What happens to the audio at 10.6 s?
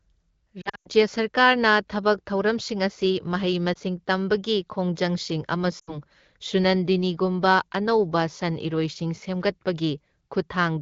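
Nothing goes wrong at 10.6 s: the speech carries on intact through that moment, passing through the AMR wideband (HD Voice) codec at 12.65 kbit/s with no fault.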